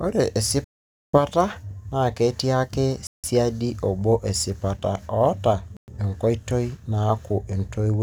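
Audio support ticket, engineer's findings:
Sample clock jitter: hiss and roughness riding on loud, bright speech, gone in pauses. Converter clock wandering a couple of microseconds; error roughly 35 dB below signal. Spectrogram: broadband haze only over high-energy regions.

Bluetooth stall: hard dropouts to silence at 0.64 s (about 490 ms), 3.07 s (about 170 ms), 5.77 s (about 110 ms). Likely interference starving the headphone buffer. Waveform: flat gaps, abrupt edges.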